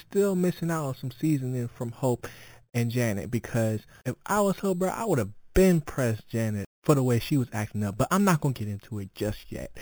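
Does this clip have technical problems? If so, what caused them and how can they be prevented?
Yes, there's imaging from sample-and-hold upsampling running through the whole speech clip. A bright, metallic fizz rides along with the speech, strongest where the speech is loud, and the lowest mirror copy sits in the 4 to 8 kHz band at about 19 dB under the main signal. That fits audio that started at 8 kHz and was brought up to 44.1 kHz just by repeating each sample, so those copies of the spectrum were never filtered out. To prevent it, use a proper resampler with an anti-imaging low-pass filter.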